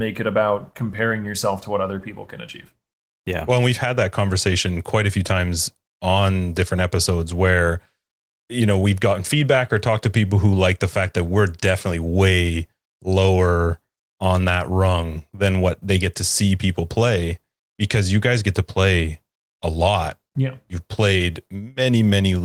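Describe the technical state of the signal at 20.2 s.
At 20.2 s the signal is intact, with no fault present, and the Opus voice compression running through it is working normally.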